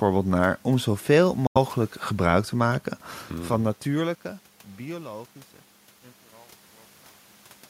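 A Bluetooth dropout at 1.47 to 1.57 s cuts the speech to abrupt silence for about 85 ms, likely from several late wireless packets. It resumes mid-stream, as though it had kept playing.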